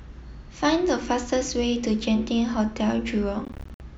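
Speech, broken by abrupt silent gaps between 3.45 and 3.80 s: about 174 ms lost in all, the longest gap 58 ms, with the sound resuming as though it had continued underneath, likely a Bluetooth dropout.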